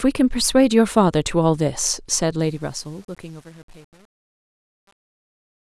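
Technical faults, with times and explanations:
2.39–5.65 s: truncation distortion on a fade. The fade-out, from about 2.4 s, fits an 8-bit level stage without dither; from 2.59 s the speech grows gritty.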